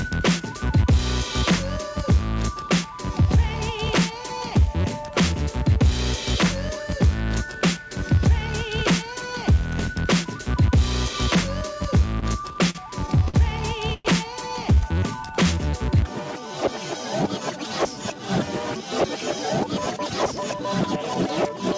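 From 12.20 to 13.36 s there are repeated stalls (stutter). Packets kept reaching the receiver late, so the jitter buffer drained eight separate times. Each time, the receiver bridged the hole by continuing the last sound, for a total of 175 ms of filled-in audio, with the longest gap 52 ms. About 15 percent of that stretch is concealment, so the sound catches and drags in short hitches, though nothing is actually lost.

At 13.94 s a call audio freeze follows, lasting until 14.07 s. The likely cause is packets held up in transit, leaving the buffer empty. The receiver extends the last sound for 110 ms as a brief buzzy continuation, without dropping to silence, and then resumes exactly where it paused. The result is a 110 ms insertion that shifts everything after it later by the same amount, with no content missing.

Between 14.75 and 15.72 s comes a jitter buffer slow-down. With its reserve running thin, the receiver rebuilt it by repeating single pitch periods and fragments of pauses over and over, adding 131 ms in total. 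Playback runs at about 87 percent of normal speed while the pitch holds steady, so sounds are audibly stretched and slightly drawn out.

From 17.55 to 18.28 s the opposite happens in a jitter buffer speed-up. Audio had piled up in the buffer beyond its target, so the receiver trimmed short pieces of one or a few pitch periods in quick succession, removing roughly 70 ms. Playback runs at about 107 percent speed with unchanged pitch, giving the passage a slightly rushed feel. Throughout, the call path itself shows no content above 8 kHz, which fits a wideband codec such as G.722.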